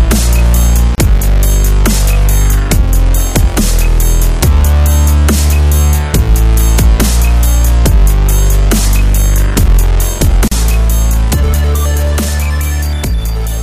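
Gaps at joins of encoded pieces occur at 0.95–0.98 s (about 31 ms) and 10.48–10.52 s (about 38 ms). Separately encoded segments were butted together untrimmed, so encoder start delay and final-frame padding leave brief silences with smeared edges before the sound resumes where it stopped.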